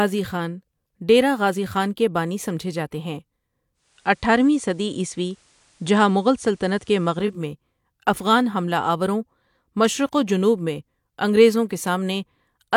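From 3.74 to 7.45 s, digital radio blending to analogue: 0.3 s cross-fade to FM, hiss, about 2 dB level shift.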